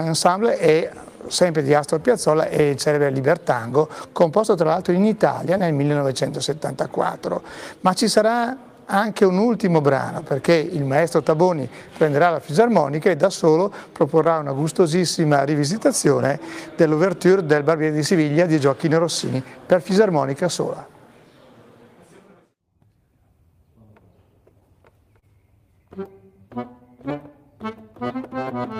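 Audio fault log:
Throughout: clock drift between sender and receiver. The sending device's clock runs roughly 2% slower than the receiver's, so the jitter buffer keeps draining. The receiver has to stretch the audio to avoid running dry, and small timing hiccups recur at uneven intervals.
0.06 to 28.74 s: repeated timing corrections. Playback runs at about 98% speed as the receiver keeps repeating short pieces to wait for the slow sender, adding around half a second overall. The edits are small and irregularly spaced.
1.32 to 10.31 s, 14.24 to 16.71 s and 24.60 to 27.63 s: scattered short gaps. About seven, then three, then three packets arrived late or went missing. The receiver bridged each hole by extending the preceding sound, mostly by 15 ms or less and at most around 30 ms in the last stretch, so these are brief ticks or smears.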